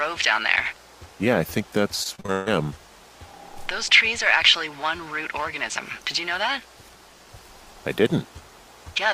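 From 2.03 to 2.50 s, repeated packet loss (robotic sound): five gaps patched by repeating prior audio, giving choppy texture; spectrogram shows smeared, frozen blocks between breaks.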